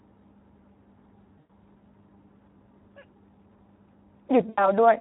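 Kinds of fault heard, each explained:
Speex codec: The speech was coded with Speex at 11 kbps, a setting too low to give the excitation signal enough bits. The result is plainly audible damage throughout, with a noisy, hoarse texture laid over the voice.
VoIP packet loss concealed by the speech codec: Packets went missing and the decoder filled the gap by stretching its last pitch and filter while lowering the gain. It happens twice, a 100 ms gap at 1.39 s and an 80 ms gap at 4.49 s. Each gap comes out as a stretched sound that fades, and the voice stays weak briefly after packets resume.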